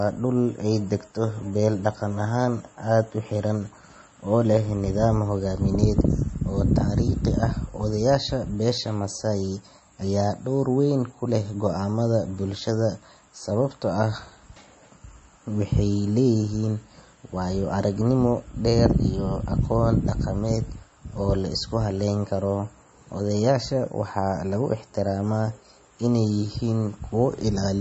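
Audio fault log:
throughout – MP3 compression: the speech sounds watery and swirly, with nothing above 8.3 kHz, likely from MP3 encoding at a bitrate near 31 kbps that drops treble and flips weak frequency lines on and off. A spectrogram shows a flat ceiling at 8.3 kHz with flickering holes beneath.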